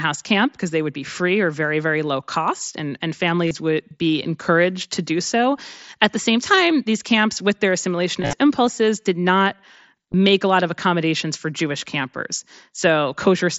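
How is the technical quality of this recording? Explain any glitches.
The recording has three short buzzy glitches from concealed Bluetooth headset packet loss. The wideband mSBC link is audible in the speech band topping out near 8 kHz.

At 3.47 to 3.51 s, between "low cost and and" and "would be encouraged to", a brief held buzz replaces about 37.5 ms of sound. At 8.21 to 8.33 s, after "these camps with their", roughly 90 ms drops out in separate bursts across 120 ms, the longest being 37.5 ms, and it gives a buzz with a small warble as the speech resumes. At 10.12 s, just before "a lot of accommodations", a 15 ms blip is filled in. In each case packets from the headset never reached the phone, and the receiver filled the gap by repeating the best-matching piece of the waveform it had just received. That repetition is what produces the tonal buzz.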